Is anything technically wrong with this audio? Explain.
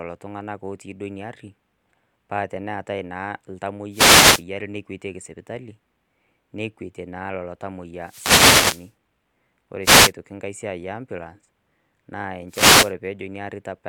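Yes. Four short bursts of static-like swish break through the speech, at 3.91 to 4.44 s, 8.01 to 8.92 s, 9.82 to 10.13 s and 12.48 to 12.93 s. These are wireless microphone noise hits. The analogue FM radio link dips when reflected signals cancel the direct one at the receiver, so the receiver's own noise surges up. The longest lasts nearly a second, around 8 s.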